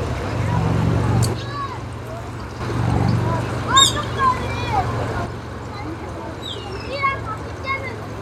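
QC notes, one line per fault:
1.34–2.60 s and 5.26 s to end: one channel drops out, likely a lost stereo feed, so the mono sum abruptly falls about 6 dB.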